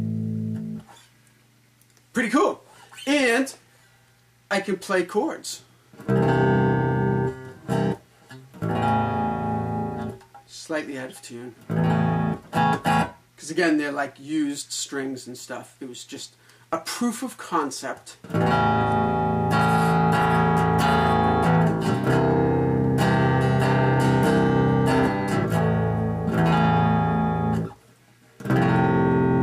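Nothing in the signal points to a technical fault at any point in the clip.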